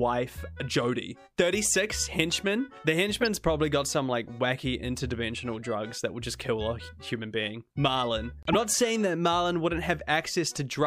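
At 3.21 to 3.26 s, a corrupt frame decoded: damaged compressed data was played as if valid, spraying energy into wrong frequencies for roughly three frames. It sounds like a brief glitch peaking around -15 dBFS, seen on a spectrogram as a smeared, misplaced vertical patch.

From 8.43 to 8.55 s, a corrupt frame muted: the decoder rejected the damaged frames and silence replaced them, a 0.12 s hole that fits about seven frame lengths. The waveform drops abruptly to a flat line, and the spectrogram shows a clean blank column while timing stays intact.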